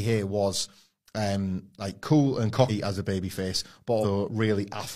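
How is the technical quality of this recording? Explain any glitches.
The recording has two dropouts where compressed frames were skipped. At 2.65 s, after "um like cool and", about two frames (roughly a tenth of a second) vanish, and at 4.00 s, after "as a babyface", about four frames (roughly a fifth of a second) vanish. Each fits a 46.4 ms frame. The decoder jumps ahead by the length of the missing frames, so each join is an abrupt break in the speech. On a spectrogram, the harmonics shift abruptly at the join. In the waveform, the envelope changes shape abruptly.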